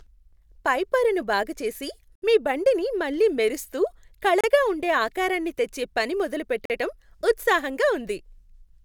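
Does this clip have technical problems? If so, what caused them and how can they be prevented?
Yes. Bluetooth stall dropouts cut this speech to silence three times: for 68 ms from 2.15 to 2.22 s, between "పైపొరను బాగు చేసి" and "మీ బండిని మళ్ళీ మెరిస్తూ"; for about 30 ms from 4.41 to 4.44 s, just before "ఉండే ఆకారానికి తెచ్చే పని"; and for 45 ms from 6.65 to 6.70 s, right after "ఆకారానికి తెచ్చే పని మొదలు". The likely cause is radio interference delaying packets to the headphones, so their buffer emptied and playback halted until retransmissions arrived. Keeping the phone close to the headphones, away from Wi-Fi routers and other 2.4 GHz sources, helps prevent this.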